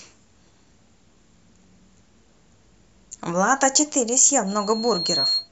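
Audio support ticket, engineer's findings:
Loudspeaker feedback squeal, 4.47 to 5.49 s. Single 4.3 kHz tone swelling over roughly 0.7 s to about speech level. Mic picking up its own loudspeaker; loop gain above one at 4.3 kHz, so that frequency self-reinforces until the loop breaks.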